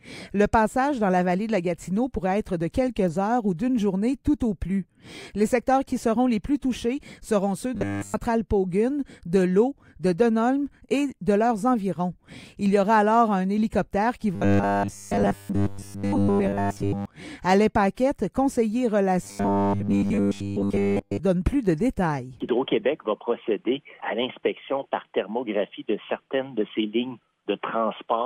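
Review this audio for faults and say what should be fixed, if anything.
Three stretches, at 7.75 to 8.14 s, 14.35 to 17.05 s and 19.23 to 21.19 s, turn into a rigid, metallic 100 Hz buzz, the robotic sound from repeated short buffers. The likely cause is audio arriving too seldom, so playback loops roughly the last 10 ms to fill the gaps. In the first stretch it loops throughout, and in the later two about 70% of the time. Enlarging the playback jitter buffer or fixing the delivery stall would prevent it.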